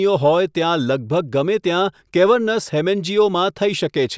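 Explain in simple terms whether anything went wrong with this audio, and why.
Nothing went wrong with this recording; no technical faults can be heard in it. The speech comes through without any dropouts, glitches or distortion to point to.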